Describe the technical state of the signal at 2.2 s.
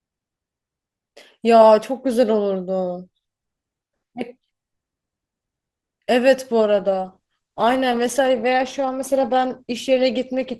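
At 2.2 s the speech signal is intact, with no dropout, clipping, glitch or other audible fault at that point.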